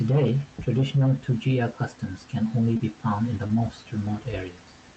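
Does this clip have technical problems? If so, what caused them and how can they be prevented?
Yes, there's short concealed packet loss: right after "customs can only" at 2.73 to 2.81 s, and after "found in the" at 3.47 to 3.51 s. Packets arrived late, so the decoder stretched the previous sound to cover the gaps, leaving brief smears. Opus in-band FEC and a deeper jitter buffer on a steadier connection would help prevent this.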